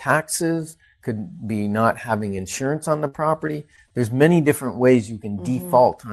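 Repeated packet loss (robotic sound) runs from 3.07 to 3.94 s. Four holes open in quick succession, the longest 58 ms and about 140 ms in total. Each is patched by stretching the preceding sound forward, so the speech turns choppy, with fragments missing and around 70 ms rebuilt. The call path's band limit, near 12 kHz, which fits Opus at about 48 kbps, shapes the tone around these holes.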